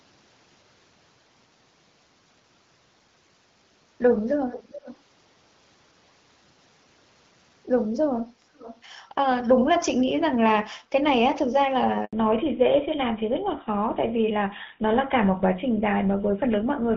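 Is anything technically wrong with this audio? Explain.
Yes. There are three kinds of fault in this speech.

Echo leak at 4.51–4.97 s, 8.55–8.81 s, 9.82–9.88 s and 10.07–10.11 s: a delayed copy of the speech returns about 0.42 s later in the first instance and 0.47 s later in the rest, at roughly 10 to 25 dB below the main signal, likely from a far-end loudspeaker whose echo canceller let residue through.

Handover gap at 12.05–12.13 s: the signal drops out for 80 ms while the call switches networks and no speech frames arrive.

Fallback to narrowband from 12.13 s to the end: everything above 4 kHz disappears, so the speech turns duller and rougher. This fits a move from HD Voice (AMR-WB) to GSM full rate.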